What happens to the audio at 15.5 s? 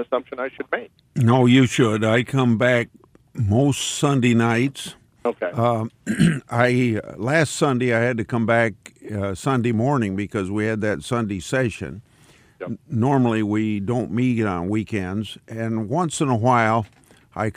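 Nothing goes wrong at 15.5 s; the audio plays through that moment intact, with no dropout, click, distortion or other fault.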